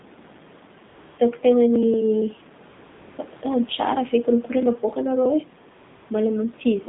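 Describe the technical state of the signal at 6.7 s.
At 6.7 s you're still hearing the AMR narrowband mobile codec that runs through the whole clip. Nothing above about 3.7 kHz gets through, and the low-bit vocal-tract modelling leaves the speech plainly buzzy and synthetic, which fits a rate around 7.4 kbps. The room noise underneath sits about 26 dB below the speech.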